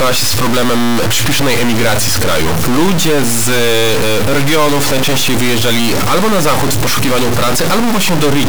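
A stuck bit runs through the whole clip, from start to finish, most likely one data line or converter bit held permanently at a fixed value. Roughly half the samples are pushed off by that bit's weight, a large step in the region of minus 10 dB relative to full scale, so the speech is wrapped in harsh, buzzy distortion. Because the error flips with the sign of quiet samples, the pauses fill with loud, gritty noise.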